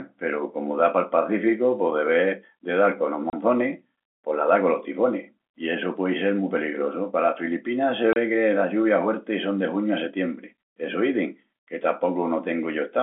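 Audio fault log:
3.30 s and 8.13 s, packet loss filled with silence: the speech drops out for 30 ms each time, the second just before "que las lluvias huertis". Each gap matches one lost packet that the receiver replaced with silence, so the sound cuts abruptly.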